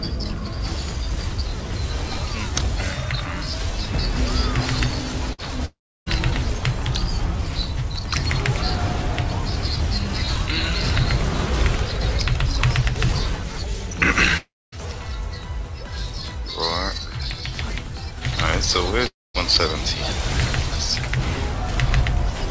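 At 5.33 s a burst of packet loss removes about 60 ms. Concealment holds the last sound as a brief fading continuation, which shows as smeared, decaying energy before the waveform resumes.

At 5.65 to 6.09 s, 14.37 to 14.75 s and 19.07 to 19.37 s the sound fades into flat silence for roughly 0.3, 0.25 and 0.2 s. This is likely a long network dropout. Each appears as a decaying tail followed by a blank spectrogram band.

Throughout, nothing appears above 8 kHz, which fits a wideband call codec.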